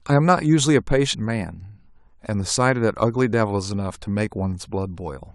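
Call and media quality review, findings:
Skip at 1.13 s, speech jumping ahead by about 50 ms. Compressed frames skipped: decoder dropped missing or damaged frames.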